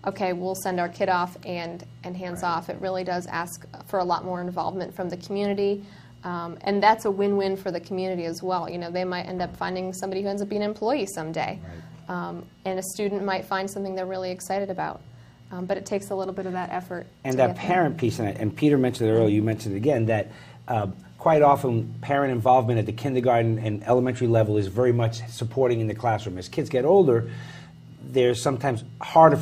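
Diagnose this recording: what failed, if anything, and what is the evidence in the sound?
Nothing in the signal chain has failed: the level, continuity and timing hold steady throughout the recording, with no break, distortion or dropout at any point.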